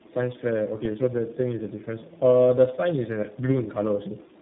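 From start to finish the speech carries tandem speech coding: three speech codecs in a row each re-encode the last one's damage, leaving it rough, warbly and cut off above 3.8 kHz.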